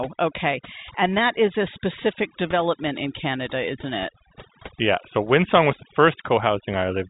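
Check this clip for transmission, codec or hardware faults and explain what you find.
One fault is present: overdone noise removal, running through the whole speech clip. The band stops near 3.8 kHz, as expected for G.711 mu-law telephone coding.

The noise reduction was set far too hard. It pushes individual frequency bands down or off whenever they sit close to its noise estimate. Quiet parts of the voice get caught and removed along with the noise. Between phrases the background drops, with small twinkling specks.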